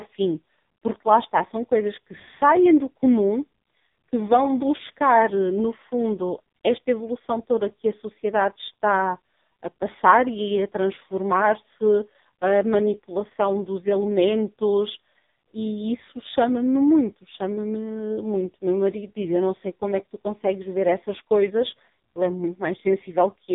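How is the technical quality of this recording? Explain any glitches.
Pretty rough, honestly. The whole thing has been squeezed through an AMR narrowband mobile codec, the old 2G/3G phone speech codec, and it's heavily damaged from start to finish. The band stops dead at about 3.8 kHz, so there's no air or sibilance. The codec rebuilds the voice from a vocal-tract model fed by a handful of pulses every few milliseconds. Here it's starved for bits, which fits one of the lowest modes, around 5 kbps, so the speech comes out buzzy and synthetic.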